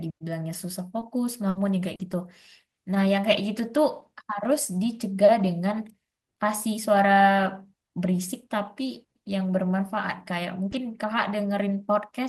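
At 0.53 to 0.55 s, a 20 ms lost packet is rebuilt from error correction. The next packet carried a low-bitrate copy, so there is no gap. That frame sounds rougher and noisier than its neighbours.

From 0.99 to 1.03 s comes a short concealed packet loss. About 20 ms never arrived in time. The receiver extended the preceding speech to cover it, leaving a brief smear. The tail, 1.01 to 1.03 s, is again rebuilt from error correction.

From 1.49 to 1.57 s a burst of packet loss removes about 60 ms. The decoder continues the last sound and fades it. The result is a held buzz or fading hiss, then a jump forward. Its final 20 ms, 1.55 to 1.57 s, is an error-correction rebuild.

From 1.95 to 2.01 s another short concealed loss fills 40 ms with a wobble. The last 20 ms, 1.99 to 2.01 s, is rebuilt from the redundant copy. One more rebuilt packet at 2.13 to 2.15 s adds a rough, grainy patch.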